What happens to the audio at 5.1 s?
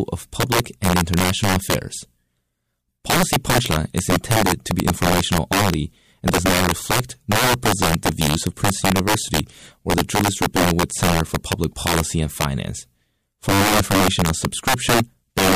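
Integer overflow runs through the whole speech clip, so it is present at 5.1 s as well. The level sits about 9 dB past the integer limit, and the few percent of samples that exceed it wrap to the opposite sign instead of flattening, producing violent full-range cracks far harsher than the buzzy flattening of ordinary clipping.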